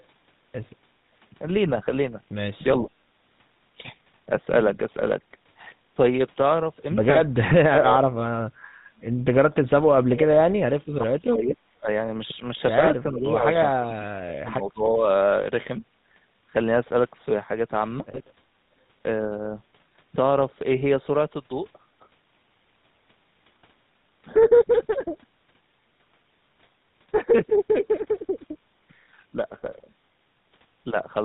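Throughout, the speech has a buzzy, gravelly roughness and nothing above 4 kHz. This is the GSM full-rate codec, plainly audible and consistent with its 13 kbps rate. It models the vocal tract and excites it with sparse, regularly spaced pulses.

From 8.8 to 8.92 s, the room sound briefly dips by about 12 dB for roughly 70 ms, then returns. This is background gated by the echo canceller: it turned the microphone down hard while the loudspeaker was playing.

The talker's speech then dips and cuts out in pieces at 9.91 to 10.28 s, 10.46 to 11.88 s, 13.03 to 13.46 s and 13.76 to 15.05 s. Most of these drops are deep, around 35 dB, though the third is shallower, around 15 dB. This is likely speech suppressed in double talk, where the echo canceller cannot tell its own talker from the far-end echo and attenuates both.

At 18.12 s a short, rough metallic ring briefly replaces the speech. These are lost GSM frames, pointing to a single dropped frame. 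The decoder filled the gap by repeating the last good frame's settings.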